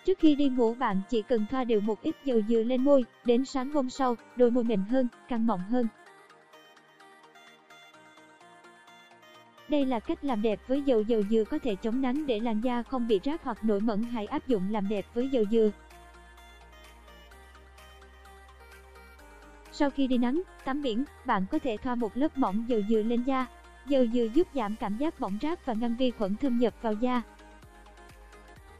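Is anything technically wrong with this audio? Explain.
No, nothing here sounds technically wrong to me; it all comes across just as it should, with nothing that catches the ear.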